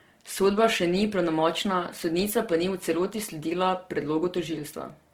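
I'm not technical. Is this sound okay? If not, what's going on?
No. The speech carries a grainy, rough texture from start to finish. The likely cause is Opus compression, a method that shrinks audio files. It keeps the overall balance of high and low sound. When it runs short of room, it fills the gaps with something close to noise. That's why the voice sounds gritty rather than smooth. The treble isn't cut off. It still reaches about 20 kHz, but it's coarse.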